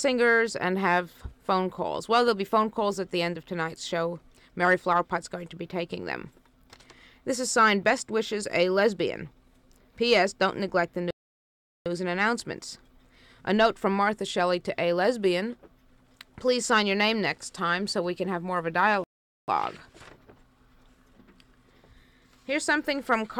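The audio cuts out twice in a playback stall: silence from 11.11 to 11.86 s, about 0.75 s, then again from 19.04 to 19.48 s, about 0.44 s. Each time it drops out mid-flow and picks back up, likely because the player ran dry of data or got blocked.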